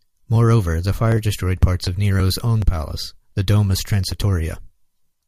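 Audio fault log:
No faults are audible in this speech recording. Nothing in it needs flagging.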